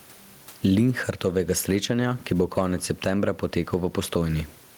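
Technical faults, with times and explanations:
Throughout, gain pumping: the level pumps up and down, a swing of around 10 dB. The likely cause is a fast limiter or compressor reining in an input gain set far too high, which flattens level differences.
2.42 to 2.62 s, hard clipping: the speech peaks exceed what a stage can pass by about 4 dB, so their tops are sheared flat. The flattened waveform adds high harmonics, heard as crackle on the peaks over those 0.2 seconds.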